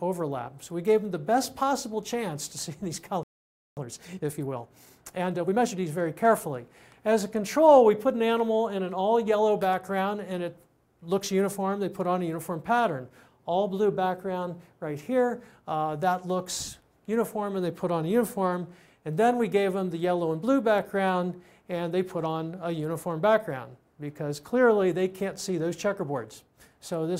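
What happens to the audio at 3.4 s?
At 3.4 s you're right in the middle of a playback stall, running from 3.23 to 3.77 s. The sound just cuts out mid-flow and sits in silence for a little over half a second, about 540 ms, before carrying on. The likely cause is the player running dry on data, or its output thread getting blocked, so nothing reached the output until it caught up again.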